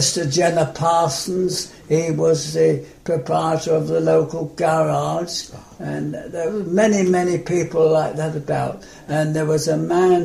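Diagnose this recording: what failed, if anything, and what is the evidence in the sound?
Nothing in the recording stood out as a fault on listening, so there is no failed stage to point to and no evidence in the sound to report.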